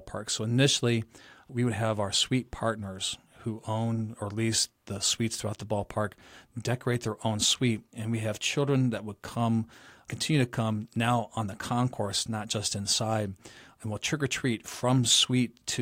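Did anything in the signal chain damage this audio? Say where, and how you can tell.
No, nothing in the signal chain has damaged this speech recording, and every stage from capture to playback leaves the signal intact.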